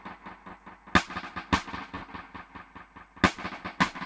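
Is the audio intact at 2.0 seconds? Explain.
No. A burst of packet loss runs from 1.96 to 2.04 s. The receiver stretches the last sound into the gap, fading it over 60 ms. The audio then resumes further on, so about 60 ms of sound is simply missing.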